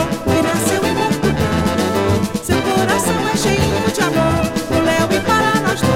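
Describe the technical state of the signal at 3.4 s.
At 3.41 s there is an overlap between stream segments. Two segments claim overlapping time stamps, so the player trims the shared stretch even though it was never duplicated. About 12 ms of sound disappears, and the waveform jumps, giving a single click or tiny skip.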